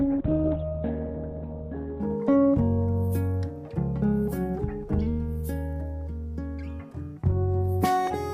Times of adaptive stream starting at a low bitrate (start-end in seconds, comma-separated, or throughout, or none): 0.00-2.00